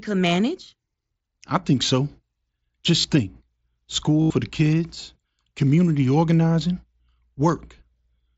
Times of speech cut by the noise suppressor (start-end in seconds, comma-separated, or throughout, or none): none